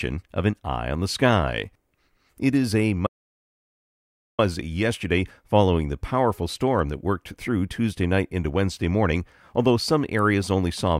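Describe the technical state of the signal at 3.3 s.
At 3.3 s the signal sits inside an audio dropout to silence. The gap runs from 3.07 s to 4.39 s, about 1.32 s in all. The speech stops abruptly mid-flow and resumes just as suddenly. Between those points there is silence, with no room tone or background hiss. The input feed was likely lost for that stretch while recording carried on writing silence. Whatever was spoken during the gap is gone.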